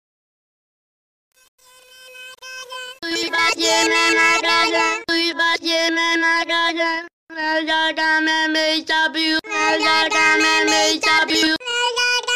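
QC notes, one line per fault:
0.00–3.52 s truncation distortion on a fade: the undithered fade-in steps coarsely, consistent with 7-bit resolution, so up to 3.29 s it sounds gritty.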